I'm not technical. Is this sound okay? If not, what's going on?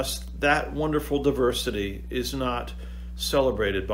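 No. There's mains hum throughout: a steady, fairly loud low buzz at 60 Hz from electrical power leaking in, unlike hiss, which is higher and airy.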